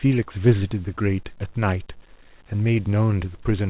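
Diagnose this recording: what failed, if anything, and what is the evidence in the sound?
Nothing failed: the speech arrives through the call path intact, and its lack of content above 4 kHz is just the normal narrowband limit of a G.711 A-law link at 64 kbps.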